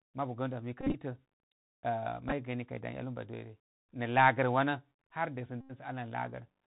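The speech has passed through the Bluetooth CVSD headset codec, a one-bit delta coder running at 64 kbps whose adaptive step cannot keep pace with loud high content. Everything above 4 kHz is gone, sibilants turn scratchy, and a plainly audible granular hiss sits under the voice.

From 0.81 to 0.95 s, Bluetooth headset packets were lost and the previous packet was repeated, about 90 ms of losses over roughly 130 ms with runs up to around 40 ms, giving a brief buzz near 267 Hz. At 2.29 to 2.33 s, shorter repeats totalling 15 ms make small ticks. From 5.61 to 5.72 s, an 86 ms unbroken run produces a steady buzz.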